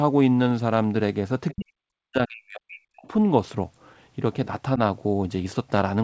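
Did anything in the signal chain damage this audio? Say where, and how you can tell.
Yes. At the call-processing stage, from 1.53 to 3.09 s the speech sinks by up to about 40 dB, likely speech suppressed in double talk as the echo canceller turned down both its own talker and the loudspeaker echo.

On the transmission link, bit errors on an ADPCM link between 5.25 and 5.43 s produce pops and rough bursts, since each flipped bit upsets the decoder's step size and predictor.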